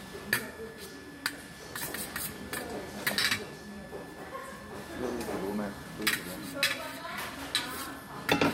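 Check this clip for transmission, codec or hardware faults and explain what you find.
One hardware fault runs through the whole clip. A switching supply whistle is present from start to finish: a switching power supply is running in an audible burst mode or beating with another one, so its switching energy leaks in as a thin high whistle between 1.72 and 1.75 kHz, roughly 20 dB below the sound.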